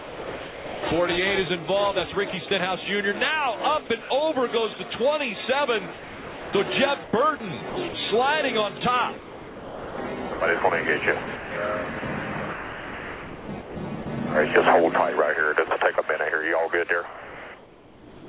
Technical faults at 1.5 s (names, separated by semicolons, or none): none